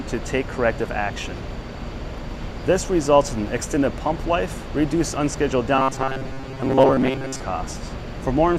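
From 5.76 to 7.42 s the sound goes robotic from repeated short buffers: a rigid, metallic buzz at about 133 Hz over most of that stretch. It's likely a playback buffer starving and looping roughly 7.5 ms of audio, skipping the real signal.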